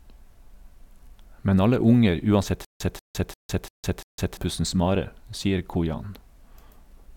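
The stream likely stalled from 2.65 to 4.37 s, replaying one fragment: a stutter with silent gaps, a 188 ms burst returning every 345 ms.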